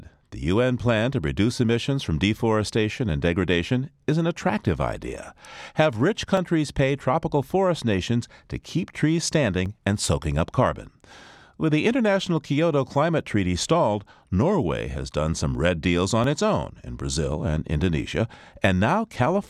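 Clock drift buffer slips run from 3.10 s to 16.24 s, heard as a regular click about every 3.29 s, roughly five in all, during the speech. The likely cause is two devices running on separate clocks a few hundred parts per million apart, so the buffer between them gradually overflows or runs dry. Each time, a block of several dozen samples is dropped or repeated, and that abrupt jump in the waveform produces the click.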